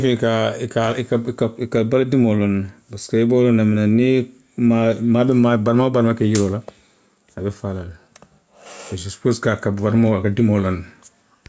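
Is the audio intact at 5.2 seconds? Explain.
No. At 5.2 seconds, as across the whole clip, there is gain pumping: the gain swings by around 5 dB, pulled down under each loud syllable, squashing the dynamics. The likely cause is input gain set far too high, with a fast limiter clamping every peak.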